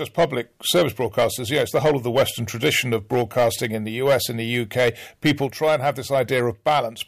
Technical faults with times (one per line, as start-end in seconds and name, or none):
0.00-7.07 hard clipping